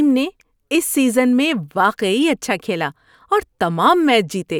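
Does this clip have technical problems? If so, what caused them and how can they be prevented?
No, nothing stood out as a technical problem on listening to this speech clip.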